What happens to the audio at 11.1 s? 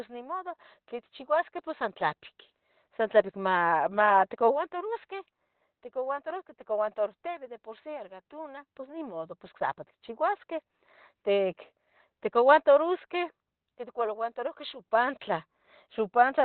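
At 11.1 s, as throughout the clip, the speech has nothing above 4 kHz and sounds muffled and hoarse. This is likely Opus compression in its narrowband SILK speech mode, which at this heavy level of damage fits a low bitrate of about 12 kbps.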